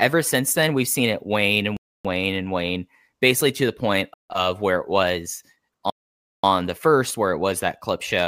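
The speech drops to dead silence three times. At 1.77 s, after "seen it wane and", it goes quiet for 0.28 s and resumes with "wane and wane basically". At 4.14 s, after "basically to the point", a 0.16 s gap precedes "of where it was". At 5.90 s, after "of where it was", the longest gap, 0.53 s, runs until "the first". These are likely Bluetooth stalls: interference delayed packets, the headphone buffer emptied, and playback froze until retransmissions arrived.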